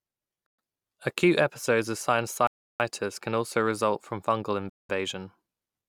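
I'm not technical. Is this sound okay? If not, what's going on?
No. The speech cuts out to dead silence three times: briefly at 0.46 to 0.59 s, for about a third of a second at 2.47 to 2.80 s right after "episodes of", and at 4.70 to 4.90 s after "also result from fungal". Each time the talking then resumes. This is likely a Bluetooth stall: radio interference delayed the audio, the headphones ran out of stored sound, and playback paused until the missing data arrived.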